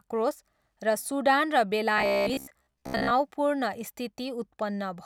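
From 1.98 to 3.12 s, audio likely arrived too seldom, so roughly 15 ms chunks were looped: robotic sound from repeated short buffers, a rigid metallic 66.8 Hz buzz.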